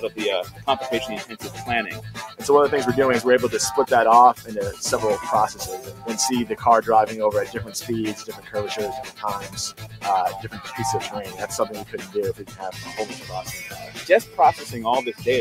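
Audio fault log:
Throughout, noise suppressor applied to music or sounds: the level breathes and pumps, with held material sagging and tails thinning while onsets punch through, so the loudness swings by something like 10 dB from moment to moment. A speech-oriented noise suppressor is running on non-speech audio. It reads sustained, steady content as background noise and pulls its gain down, then releases when a sharp attack arrives. That produces the unsteady, fluttering texture.
0.05–0.66 s, 1.31–1.51 s, 5.86–6.56 s, 7.47–10.61 s and 11.28–14.38 s, sound cut by the noise suppressor: in each stretch the sound sinks in level or its decay is clipped short. The dips reach about 10, 5, 7, 12 and 12 dB respectively. In the first and third spans roughly a third of a second is pulled down, in the second a brief moment, and in the last two about a second and a half apiece. The suppressor judged these steady or fading passages to be noise and attenuated them harder than their surroundings.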